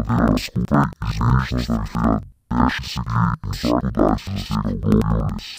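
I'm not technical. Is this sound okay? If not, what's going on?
No. From start to finish the speech sounds an octave lower than it should, doubled, as if two copies play at once, and choppy, with a flutter repeating about 10.8 times a second. This is interleaved audio read as planar. Stereo audio stores left and right samples alternately, but here each chunk of about 93 ms was split into a first half and a second half instead. Both halves play side by side at half speed, so the pace stays normal while the pitch drops.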